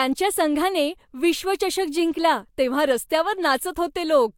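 No faults can be heard anywhere in the recording.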